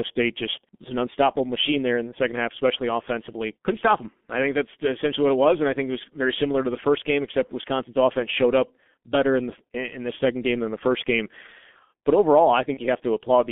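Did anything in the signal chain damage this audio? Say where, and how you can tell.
Yes. At the codec stage, the whole clip carries heavy G.723.1 codec damage. The speech is confined to a telephone band of roughly 200 Hz to 3.5 kHz, so it sounds muffled, and it has a hoarse, rough texture with smeared consonants. That combination points to a low-rate coder around 6.3 kbit/s. It rebuilds the voice from a coarse model refreshed only every 30 ms frame, so fast spectral detail between updates is lost.

At the network stage, there is VoIP packet loss concealed by the speech codec from 12.74 to 12.82 s. The sound is briefly stretched out and drops in level. The gap fits a single lost 30 ms frame. The decoder filled it by repeating its last pitch and filter settings with falling gain, and because each frame depends on the previous one, the damage extends past the missing 30 ms.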